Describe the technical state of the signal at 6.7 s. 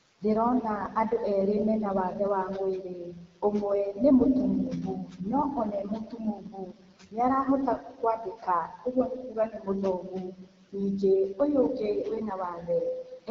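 At 6.7 s the sound sits inside a stretch of speech cut by the noise suppressor, running from 5.65 to 7.47 s. The suppressor mistook parts of the speech for noise and pulled them down by as much as about 19 dB, about one and a half seconds in all, so soft consonants and endings sound swallowed. Unlike a dropout or gap, the level sinks smoothly along with the background rather than breaking off.

Noise suppressor artifacts are present throughout. The suppressor lowers the bands it judges to be steady noise by about 18 dB frame by frame, so the room noise, about 19 dB under the speech, ducks in pauses and rises under the speech. This pumping follows the speech itself, which sets it apart from a compressor's slower, level-driven breathing.

The AMR wideband (HD Voice) codec also colours this moment, with plainly audible rough, raspy texture and nothing above 7.2 kHz. That fits one of its lowest rates, around 8.85 kbit/s. 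The grain comes from the pulse-driven vocal tract model running short of bits, which distinguishes it from the swirly, metallic smearing of a music-oriented transform codec.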